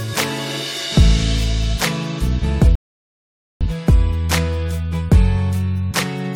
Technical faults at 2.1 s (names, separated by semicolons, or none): none